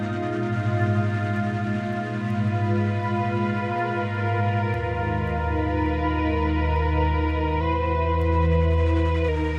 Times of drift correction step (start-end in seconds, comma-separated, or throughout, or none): 7.61-9.29